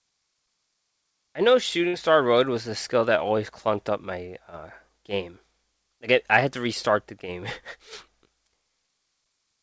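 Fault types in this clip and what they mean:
Burst of packet loss: A short run of audio never reached the receiver in time to be played. It hits at about 1.88 s, just after "I know", and runs until about 1.96 s. The receiver stretched the last sound for about 56 ms, so it is briefly held and fades away. The speech then resumes with about 60 ms skipped. The call audio carries nothing above 8 kHz.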